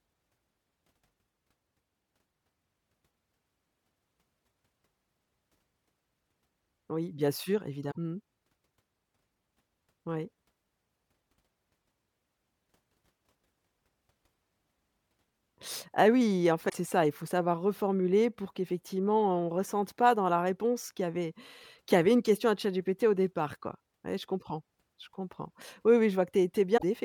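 At 7.88 to 7.97 s there's a short glitch in the speech, and the same thing comes back at 16.65 to 16.73 s and again at 26.76 to 26.83 s, each under a tenth of a second. It's damaged data in the compressed stream: some bytes in those stretches are wrong, so the decoder can't read those frames cleanly, loses its place, and hunts for the next good frame header. The blip is that brief stretch of misread data.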